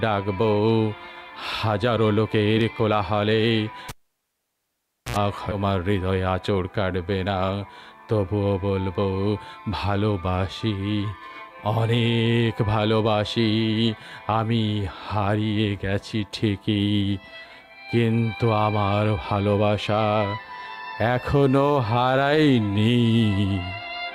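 At 3.89 s the cable is pulled and plugged in. A pop starts it. Near silence lasts about 1.23 s. Then comes a 75 ms burst of 60 Hz mains buzz as only the tip touches. A second pop at 5.17 s marks the sound's return.

From 5.51 to 5.53 s the audio skips ahead. Around 0.4 s of sound is dropped while later audio was already queued. Nothing fills the gap. The two sides are joined almost directly, so playback lurches forward and cuts the delay by about that amount.

From 6.11 to 6.58 s a jitter buffer speed-up follows. The buffer held more audio than it aims for. The receiver cut short pitch-period pieces, about 50 ms in total. The sound runs at 109% speed with unchanged pitch and feels hurried.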